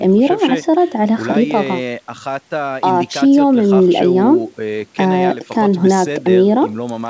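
No technical faults can be heard in this speech clip. It comes through a call's microphone processing and a G.722 call path, and nothing is heard above 8 kHz, which is the normal band limit of that codec rather than a defect.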